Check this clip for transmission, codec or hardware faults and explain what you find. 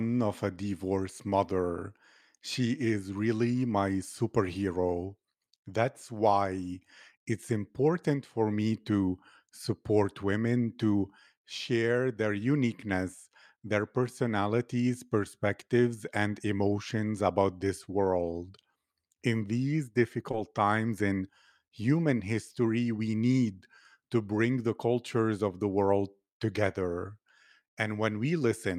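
One transmission fault is present: a short stall from a late packet between 20.31 and 20.35 s, just before "times in human history". A packet failed to reach the receiver on time, so the jitter buffer emptied and the receiver held the last stretch of speech for about 20 ms until the data turned up, then resumed at the same point. Nothing is lost, but playback slips 20 ms later, and that sound lingers slightly too long with a faint buzzy or dipped quality.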